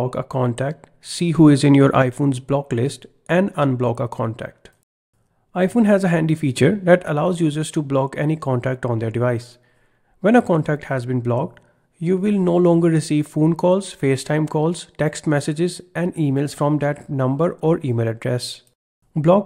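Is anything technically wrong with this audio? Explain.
Yes. There are two sudden gain jumps, from 1.35 to 2.02 s and from 6.57 to 7.08 s. Each time, the sound and its background noise rise together by about 6 dB, then drop back. The likely cause is gain applied abruptly between samples, without any ramp.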